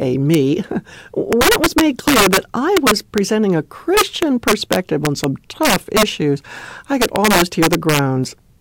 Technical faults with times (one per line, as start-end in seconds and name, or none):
0.34 integer overflow
1.33-2.38 integer overflow
2.77-3.18 integer overflow
3.97-5.24 integer overflow
5.63-6.03 integer overflow
7.02-7.99 integer overflow